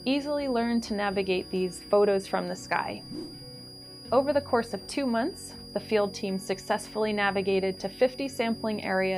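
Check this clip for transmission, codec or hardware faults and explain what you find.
A hardware fault runs throughout. Switching supply whistle: a high tone wandering between about 4.8 and 4.9 kHz, roughly 20 dB under the sound, from a power supply cycling audibly. Unlike mains hum, it sits high and drifts.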